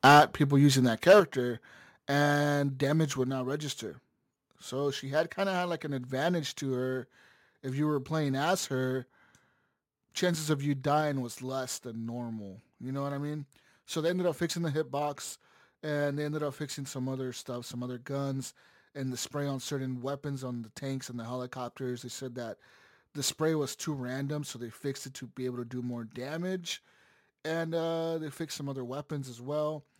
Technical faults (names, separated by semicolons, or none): microphone overload; microphone volume stepped down